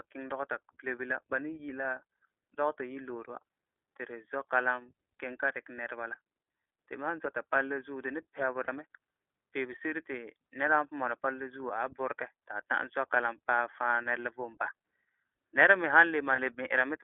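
The whole speech clip runs through the iLBC codec. It's squeezed into a phone band of roughly 250 Hz to 3.4 kHz, with nothing on top, and there's a plainly audible rough, synthetic edge from the excitation coding, which fits iLBC's 20 ms frame mode.

Then there are two spots of lost iLBC frames: 8.65 to 8.69 s (about 40 ms, roughly two frames) and 16.36 to 16.40 s (about 20 ms). The decoder fills each gap by repeating the last pitch cycle with some noise, so you get a brief held, buzzy vowel, and the speech snaps back right after.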